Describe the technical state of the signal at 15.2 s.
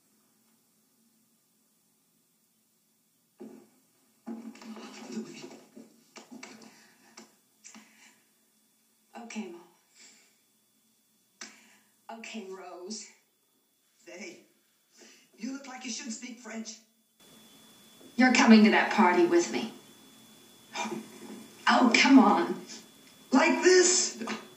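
At 15.2 s you're still inside the stretch from 0 to 17.2 s where the sound collapses by about 20 dB when summed to mono. The likely cause is one channel inverted, so everything common to both sides cancels, leaving a faint residue of their differences.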